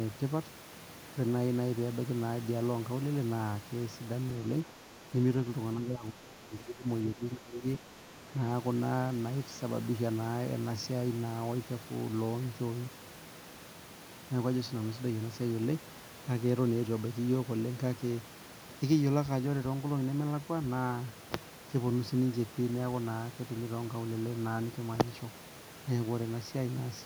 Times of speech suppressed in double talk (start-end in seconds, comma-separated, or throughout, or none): 5.80-6.87, 7.15-7.95